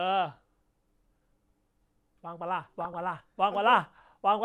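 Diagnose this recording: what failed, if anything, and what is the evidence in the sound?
DAB burbling, 2.79 to 3.00 s, codec stage: uncorrected bit errors of around 0.4 percent corrupt MP2 sub-band samples and levels, giving short noise blips and level jumps in single sub-bands over the speech.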